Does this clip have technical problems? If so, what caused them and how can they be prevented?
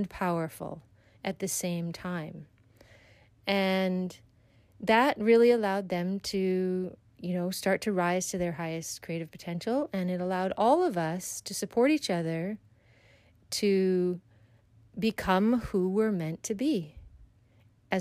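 No, the signal shows no technical problems, so there is no cause to trace and nothing to prevent.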